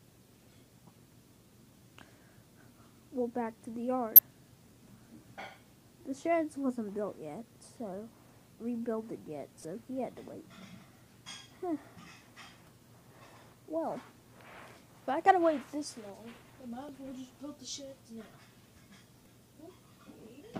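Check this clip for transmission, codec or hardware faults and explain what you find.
The clip has one kind of fault: damaged data in a compressed stream. Brief blips occur at 4.16–4.19 s, 9.62–9.65 s, 12.65–12.68 s, 16.89 s and 19.23–19.26 s. Corrupt bytes make the decoder misread frames and lose sync, so each spot sounds like a short glitch.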